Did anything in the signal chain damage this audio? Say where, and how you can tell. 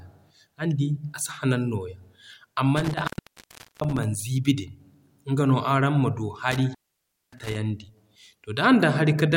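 Yes. An intermittent contact in the analogue wiring cuts the speech twice, within 2.77 to 4.04 s and again within 6.52 to 7.56 s, with dropouts of about 740 ms and 580 ms. A loose plug or cable briefly opens the circuit, so crackle marks each edge, which a clean digital dropout would lack.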